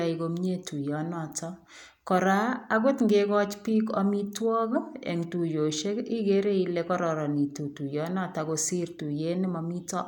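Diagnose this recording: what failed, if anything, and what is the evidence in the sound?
Nothing in the signal chain failed: the recording shows no audible fault at any stage, from capture and conversion through to storage and playback.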